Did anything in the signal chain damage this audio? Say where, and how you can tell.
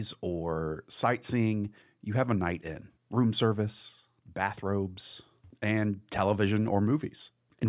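No, nothing in the signal chain damaged this audio.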